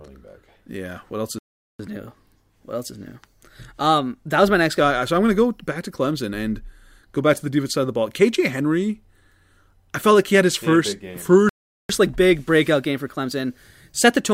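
Speech recording with two playback stalls, each likely caused by the player running out of buffered data or its thread being blocked: the sound cuts to silence for about 0.41 s from 1.39 s to 1.79 s, and again for about 0.40 s from 11.49 s to 11.89 s, just after "he had his first", before resuming. After each stall the player makes up lost time with catch-up at higher speed, resampling its backlog at 1.1 times normal rate, so the voice runs quicker and about a semitone and a half higher from 1.79 s to 4.79 s and from 11.89 s to the end.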